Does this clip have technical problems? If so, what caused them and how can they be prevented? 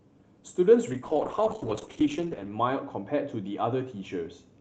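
Yes. From 0.92 s to the end, a call bitrate drop makes the speech rough and watery, which fits the Opus encoder falling from about 32 to 8 kbps and staying at its lowest for 1.6 s. Unlike packet loss, nothing drops out or repeats; the coding simply turns coarser. Setting a higher minimum encoder bitrate and giving the call a steadier network connection would prevent it.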